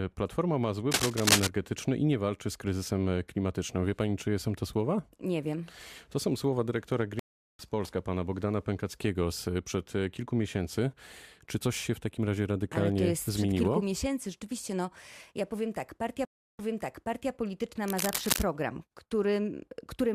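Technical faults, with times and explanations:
0.91–1.48 s, cable scratch noise: dense, uneven scratching sits over the speech, somewhat louder than it, ending just before "i nie walczy z". A worn cable or connector being moved is the likely cause.
7.19–7.62 s, stream reconnect: after "są słowa dyrektora" the sound drops out for 0.4 s. A fresh decoder then picks up roughly a third of a second later, so a short stretch is missing.
16.25–17.31 s, stream reconnect: after "ja powiem tak partia" a 0.34 s silence follows. Playback resumes 0.72 s earlier, so that stretch is heard twice.
17.88–18.43 s, cable scratch noise: rustling bursts about as loud as the speech. Shifting contact resistance is the likely cause.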